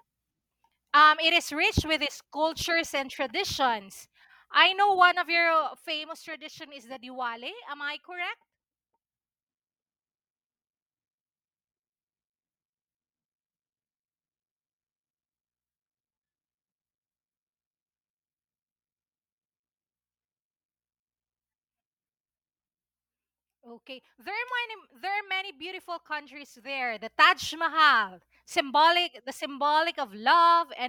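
Listening through the speech, nothing stood out as a technical fault at any point.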